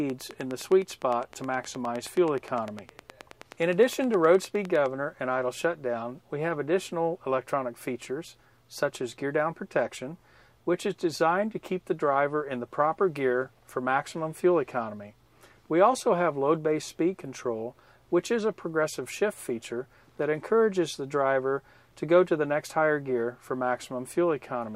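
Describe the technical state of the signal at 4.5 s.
At 4.5 s the signal is still carrying a train of clicks, which runs from 0.10 s to 4.87 s. Near-identical pulses tick over the sound at a steady 9.7 per second, around fifty in all, peaking a few decibels above the program. Interference from nearby equipment or a faulty connection is the likely source. Unlike random crackle or dropout pops, these clicks keep one shape and an even spacing, and they continue through quiet passages.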